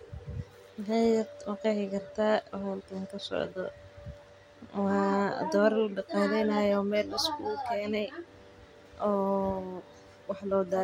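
No technical faults are audible.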